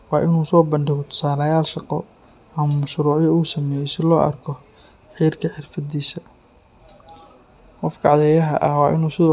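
Listening to the speech recording, nothing stood out as a technical fault at any point.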